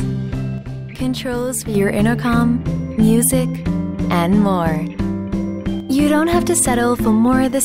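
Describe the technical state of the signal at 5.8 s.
At 5.8 s the level drops abruptly by about 6 dB and holds there until 5.89 s, a span of roughly 90 ms, before returning just as suddenly. The likely cause is one channel dropping out: with one side of the stereo pair lost, the mono sum keeps only half of the material common to both channels, and anything carried solely by the missing channel vanishes for that brief interval, heard as a short dip.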